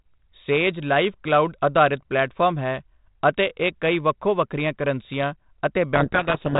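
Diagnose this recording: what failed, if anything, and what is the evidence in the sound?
A codec payload misread hits the last part of this speech clip, from 5.94 s to the end at 6.59 s. The fault is at the codec stage. The G.726 ADPCM code words arrive with their bit order reversed. The decoder accepts each word as valid, but it reads the wrong difference values and steers its adaptive prediction off course, so the speech drowns in harsh, rasping distortion. On a spectrogram, dense broadband grit fills the band up to the 4 kHz telephone limit and smears out the harmonics. The waveform turns ragged and noise-like. Before the fault, the telephone band carries only the light hiss expected from ADPCM, consistent with a 32 kbit/s mode.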